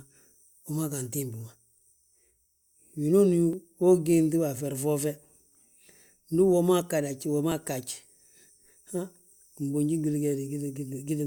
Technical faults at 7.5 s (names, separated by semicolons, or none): audio missing between chunks